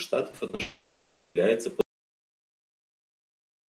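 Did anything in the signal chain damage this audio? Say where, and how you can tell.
Yes. From 0.31 to 0.61 s the speech turns choppy and robotic: repeated packet loss on the network path, with five short holes, the longest 40 ms. The receiver patched each one by extending the preceding sound, which concealed about 40% of that span.

From 0.61 to 1.37 s, about 0.74 s of audio is missing. It is filled with a smeared continuation of the last sound rather than silence. That points to a long network dropout as the likely cause, with the receiver's concealment stretching what it last had.

From 1.81 s to the end, the signal drops to silence, with no room tone underneath. That is an audio dropout to silence. The likely cause is upstream: the input was lost while the recorder or encoder kept writing silence.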